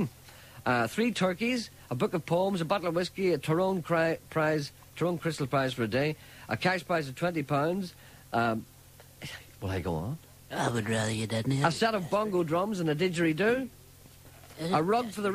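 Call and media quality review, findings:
No technical faults found in the signal path across the reviewed audio; level, continuity and timing hold steady throughout.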